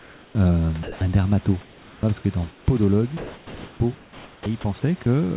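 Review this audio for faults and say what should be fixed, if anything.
Comfort noise in place of the background fills the pauses at 0.00–0.35 s, 0.83–1.01 s, 1.61–2.03 s and 2.51–2.66 s. The room's own hiss, about 26 dB below the speech, gives way to a steady, featureless synthetic noise, most likely from discontinuous transmission. It runs about 3 to 4 dB quieter in three gaps and about 1 dB louder in one. Real room noise keeps its texture across pauses, which sets it apart.

An onset clipped by the voice detector comes at 1.0 s. The detector likely reacted about 20 ms late, so the first moment of the sound was never sent. The speech jumps straight out of comfort noise without its soft start. There is no silent gap, which distinguishes it from a dropout or lost packet.

Sound chopped by the voice detector runs from 3.17 to 4.64 s, where about 1.2 s in total is replaced. The detector likely toggled repeatedly between sending and pausing, so quiet edges vanish. 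Packet loss falls at random, whereas these replacements land on the quiet parts and are filled with noise.

The speech sits in a band ending at 4 kHz, which fits a G.711 call path.

To fix these faults, disable discontinuous transmission or give the voice detector more hangover and a faster, more sensitive onset threshold.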